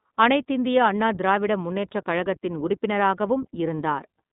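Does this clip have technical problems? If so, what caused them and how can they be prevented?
Yes, the whole clip has iLBC codec damage. The speech is band-limited to roughly 150 Hz to 3.7 kHz, with nothing above 3.8 kHz. Coding each short frame independently, which fits 20 ms frames at 15.2 kbps, gives a plainly audible rough, synthetic edge. To avoid it, use a wideband codec like Opus.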